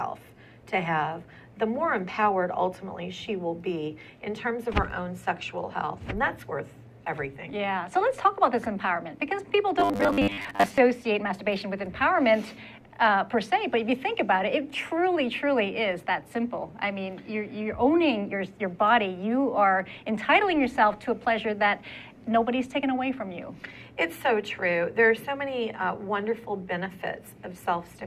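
Between 9.80 and 10.80 s the audio turns robotic, a rigid 100 Hz buzz, likely from repeated short buffers of about 10 ms standing in for roughly half the real sound.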